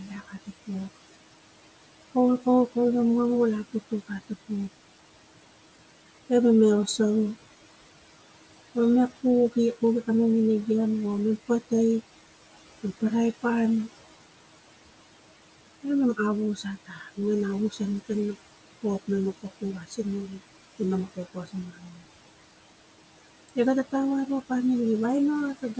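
Throughout the recording, the background hush drops away between phrases and swells back under them. These are noise suppressor artifacts: the suppressor pulls the room noise down by about 18 dB, frame by frame and band by band.

At 0.08 to 0.49 s, 16.86 to 17.18 s, 19.61 to 19.99 s, 21.34 to 21.54 s and 21.71 to 22.0 s, bits of speech turn faint or swallowed, dipping by about 10 to 14 dB. In each case the suppressor mistook soft speech for noise and cut it.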